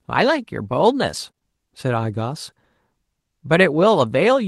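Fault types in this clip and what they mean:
Lost packet rebuilt from error correction: A packet of the Opus call stream went missing at 1.27 to 1.29 s, and the decoder played the low-bitrate backup copy carried in the next packet instead of leaving a hole. There is no gap in the speech, but those 20 ms come out rougher and noisier than the audio around them, heard as a brief grainy patch rather than a dropout.
Short concealed packet loss: Right after that, three back-to-back 20 ms stretches, at 1.31 to 1.35 s, 1.35 to 1.39 s and 1.39 to 1.43 s, never reached the decoder in time and had no backup copy. The receiver covered each hole by extending the preceding sound and then blending back into the real signal, so together they form a smeared, wobbling stretch of roughly a tenth of a second.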